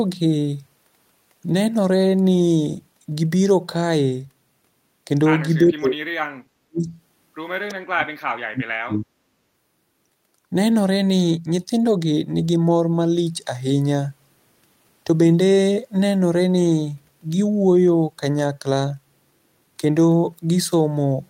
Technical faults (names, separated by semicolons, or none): speech suppressed in double talk